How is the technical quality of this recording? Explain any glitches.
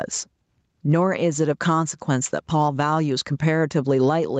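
Technical quality suffers from gain pumping throughout the speech, with the call path's band limit leaving nothing above 8 kHz. The level swings by around 10 dB: loud and soft parts end up closer in level and the sound is squashed, likely from excessive input gain driving a fast limiter.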